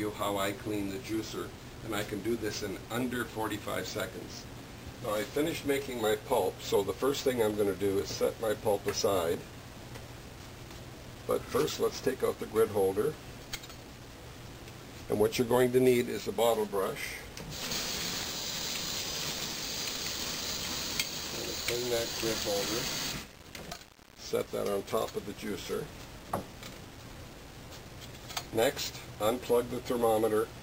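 At 9.34 s there's a single sharp click, and another just like it turns up at 30.02 s, right near the end. Both are most likely dropped samples: a tiny run of the stream, a fraction of a millisecond, goes missing, so the waveform leaps straight from one value to a later one. That gap is far too short to take any sound away. You just hear the step as a click, and on a spectrogram each one is a thin vertical line.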